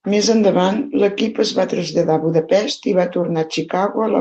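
Nothing's wrong with this one: it's speech that came through a WebRTC call path, and the top end tapering off around 8 kHz is just how that Opus link normally sounds, so there's no fault to point to anywhere in it.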